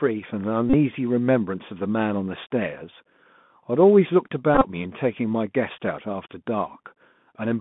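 Throughout, the speech carries the Bluetooth CVSD headset codec, consistent with its 64 kbps one-bit stream. The spectrogram shows an empty band above 3.5 kHz, scratchy sibilants and a granular hiss floor.

At 0.70–0.74 s, and again at 4.55–4.67 s where the dropouts are scattered with the longest run about 20 ms, a Bluetooth headset packet is repeated. Lost packets are refilled with the previous one, producing a brief buzz near 267 Hz. This appears as identical repeating waveform cycles and evenly spaced vertical striping.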